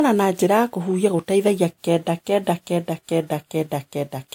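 Throughout the speech, two distinct sets of coding artefacts overlap. This is likely transcoding between lossy codecs, a WMA-style encode then Vorbis. Nothing remains above 16.6 kHz. The second encoder spends bits re-coding the first one's damage and adds its own, so both sets of artefacts are heard together.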